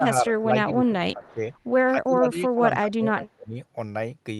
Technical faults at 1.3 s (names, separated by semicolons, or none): speech suppressed in double talk; echo leak